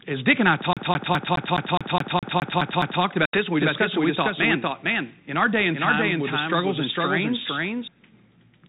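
From 0.73 to 3.03 s the audio behaves like a CD stuck on one turn. A fragment of about 0.21 s repeats 11 times, with a short mute at each jump back. That gap at every seam, and the fast, even rhythm, mark it as a skipping disc rather than a smooth buffer loop.

Between 3.25 and 3.37 s there is packet loss on an ADPCM call. An 80 ms hole with hard edges, pointing to several lost packets, replaces the audio with silence. Because the decoder's adaptive predictor and step size lose sync with the sender, this is more than a plain dropout.

From 3.62 to 7.88 s there is a doubled audio track. A full-band copy at about the same level trails by roughly half a second. It has no decay or room colour and starts and stops abruptly, so it is not an echo. It was likely captured a second time by a slower path or left as two misaligned copies in an edit.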